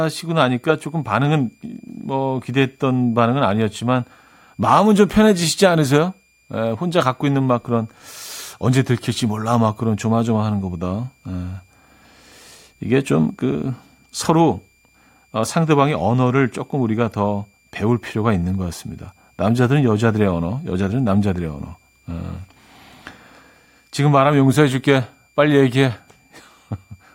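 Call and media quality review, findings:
Switching supply whistle throughout. A switching power supply is running in audible burst mode or beating against a second converter, coupling into the audio path. The result is a faint high whistle drifting between 2.37 and 2.41 kHz, roughly 40 dB below the speech.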